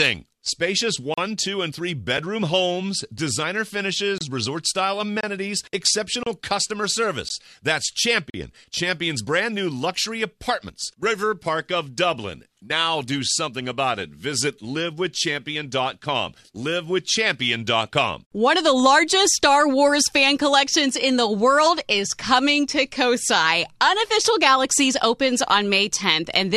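The audio has gaps between stream segments: hard-edged silent holes at 1.14–1.18, 4.18–4.21, 5.21–5.24, 6.23–6.27, 7.29 and 8.30–8.34 s, each lasting about 16 to 40 ms and recurring at roughly one-second intervals. The timing of successive segments leaves small holes that the player fills with silence, and no audio is lost.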